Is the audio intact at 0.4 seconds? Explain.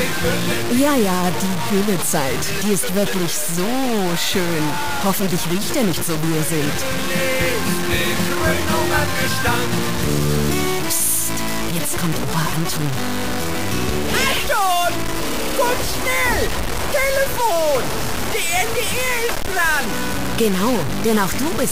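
No, at 0.4 s, as everywhere in the clip, there's low bit depth without dither. The grit sounds like only about 3 bits, likely truncated with no dither, so the error tracks the sound, nearly as loud as it, and the quiet parts sputter or drop out.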